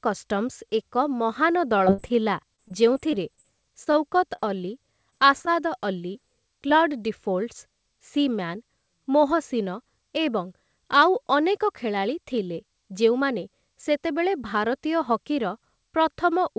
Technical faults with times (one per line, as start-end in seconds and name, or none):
1.78-2.12 repeated packet loss (robotic sound)
2.56-3.46 repeated packet loss (robotic sound)
3.84-3.88 short concealed packet loss
3.92-3.96 short stall from a late packet
4.36-4.40 short concealed packet loss
5.10-5.49 repeated packet loss (robotic sound)
6.13-6.16 short concealed packet loss
6.68-6.72 short concealed packet loss